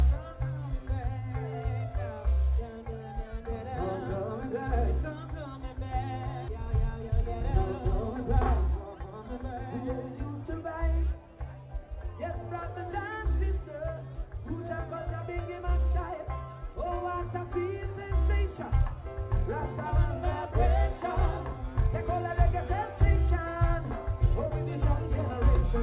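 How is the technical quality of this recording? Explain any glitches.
The recording has two playback glitches close together. The whole clip is telephone-band, with nothing above 4 kHz, which fits a G.711 A-law call codec.

The skip ahead comes at 6.48 to 6.50 s. A stretch of audio, roughly a second of it, was dropped while later audio was already waiting. Nothing fills the gap, so the sound on either side is spliced almost directly and the listener hears an abrupt jump forward, as though a piece was cut out.

Jitter buffer speed-up follows from 6.57 to 9.38 s. After the jump the buffer still held more audio than it aims for, so the receiver repeatedly trimmed short pitch-period-sized pieces, about 0.3 s in total. Playback runs at about 109% of normal speed with the pitch unchanged, so for nearly three seconds the sound seems hurried before settling back to its normal pace.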